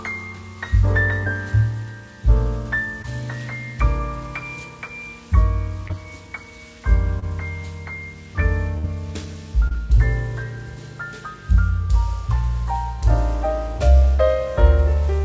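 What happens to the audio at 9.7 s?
A brief smear passes through the sound between 9.68 and 9.75 s. This is short concealed packet loss: about 20 ms of audio failed to reach the decoder in time, so the receiver extended the preceding sound to cover the gap, then blended back into the real signal.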